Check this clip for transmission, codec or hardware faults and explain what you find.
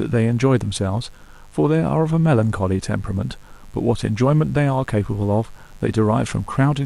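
There's one hardware fault here: mains buzz running under the speech for the whole clip. Sharp switching spikes from a dimmer, rectifier or poor shielding get in twice per 50 Hz cycle, stacking harmonics up into the kilohertz range. The result is a steady, raspy buzz sitting well below the speech level.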